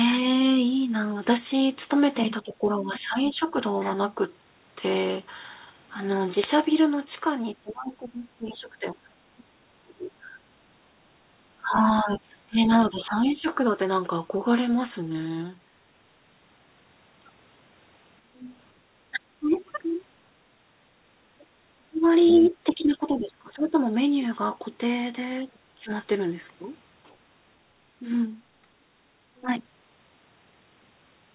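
Speech heard through a narrowband call path, with nothing above 4 kHz, which fits G.711 A-law at 64 kbps. In three stretches the talker's voice dips and thins: 2.43–3.41 s (down roughly 15 dB), 7.58–13.48 s (around 25 dB at worst, about 4 s in total) and 18.27–29.47 s (roughly 20 dB, about 2 s in total). This is speech suppressed in double talk, likely because the echo canceller could not separate the talker from loudspeaker echo and turned both down. From 10.74 to 11.3 s the room sound drops by about 10 dB and then returns, background gated by the echo canceller as it clamped the microphone during playback. The other side's voice leaking through is heard faintly at 11.97–12.75 s, quite clearly at 19.54–22.52 s (only about 10 dB below the talker) and as a barely audible scrap at 29.36–29.41 s, likely loudspeaker sound the canceller failed to remove.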